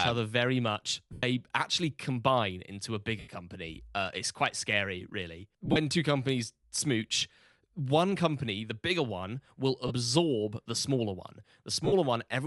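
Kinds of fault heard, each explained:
Bluetooth LC3 compression: throughout, a grainy, breathy edge on the speech, likely from LC3 coding discarding upper spectrum and filling it with noise.
Lost LE Audio frames: at 1.13, 3.19, 5.65, 9.87 and 11.85 s, 30 to 100 ms gaps where the decoder's repeated, sign-scrambled spectrum smears into noise.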